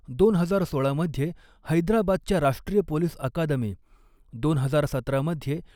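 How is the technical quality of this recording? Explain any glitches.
The technical quality holds up, with no glitches to explain anywhere in the recording.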